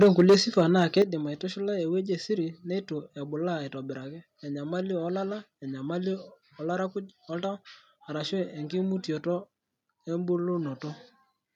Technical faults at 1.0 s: microphone overload; microphone volume stepped down

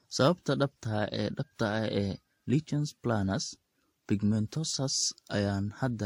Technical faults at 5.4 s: transcoding between lossy codecs

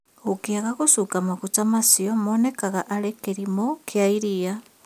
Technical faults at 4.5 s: none

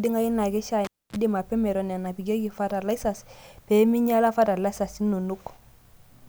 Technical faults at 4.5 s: none

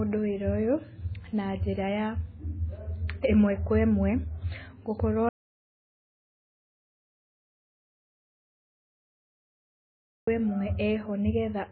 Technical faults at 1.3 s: MP3 compression

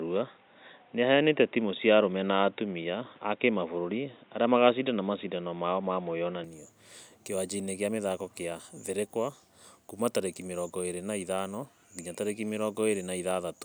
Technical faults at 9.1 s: none

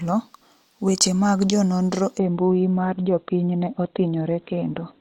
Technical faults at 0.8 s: none

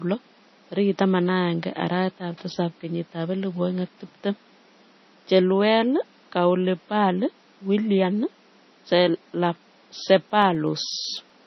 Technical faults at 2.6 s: MP3 compression

